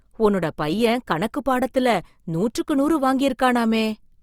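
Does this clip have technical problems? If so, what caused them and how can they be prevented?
Yes. Opus compression runs through the whole clip: the speech sounds grainy and rough, with tonal parts turned noisy, which fits the encoder's music mode filling starved bands with folded or noise energy at a low rate, likely around 24 kbps. Bandwidth holds up, reaching about 20.2 kHz. Encoding at a higher bitrate, or keeping an uncompressed master, would prevent it.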